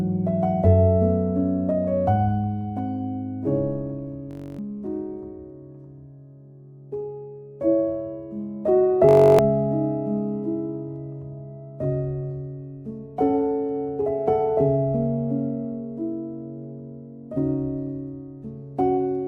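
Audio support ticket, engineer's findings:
System hang loop at 4.31–4.59 s: audio freezes into a steady buzz around 47 Hz, the same 21.33 ms slice repeating 13 times. Driver or host stalled while the card kept replaying its ring buffer; fits a 1024-sample buffer.

Same system hang loop at 9.09–9.39 s, 14 repeats, same 47 Hz buzz. Roughly a third of a second of audio gone each time. Worth checking what's blocking the audio thread.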